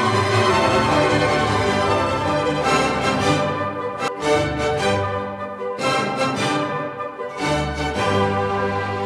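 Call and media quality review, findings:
Doubled audio track, 0.00 to 4.08 s, already under way at clip start. Full-band second copy trails the original by about one and a half seconds, at roughly equal level. Copy dry, no decay or room colour. Ends abruptly at 4.08 s. Cause likely a second capture via a slower path, or an edit holding two copies out of step.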